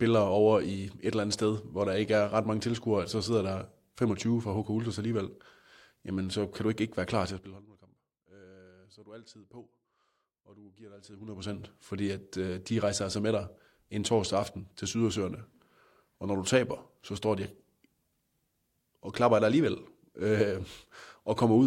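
A speech clip with zipper noise in two places. From 7.29 to 7.66 s, just after "ikke ikke være klar", the level drops by about 20 dB in 3 dB steps, roughly twenty a second. From 11.02 to 11.60 s, between "og du giver dig" and "fordi at øh de", it climbs back by about 20 dB, roughly fifteen steps a second. Each unsmoothed step clicks, so the moves tick audibly.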